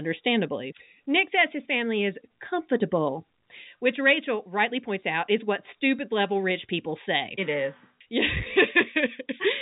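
No technical faults are present in the speech, which runs over an ordinary G.711 A-law telephone path with the band ending near 3.8 kHz, as that format dictates.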